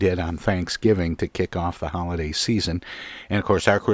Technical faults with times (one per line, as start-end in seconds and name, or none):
none